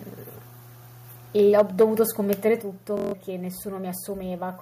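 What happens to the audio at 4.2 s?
At 4.2 s the audio carries on intact, with no audible fault at that moment.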